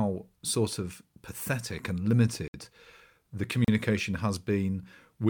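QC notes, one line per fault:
2.48 to 2.54 s, block of digital silence: right after "sort of pathetic and" the speech drops out completely for 60 ms. A run of samples was written as zeros, most likely because the output buffer was not filled in time, and the audio switches to zero and back without any fade.
3.65 to 3.68 s, block of digital silence: a shorter hole of about 35 ms, heard as a short gap. The mechanism is the same, a block of zeroed samples with abrupt edges on both sides.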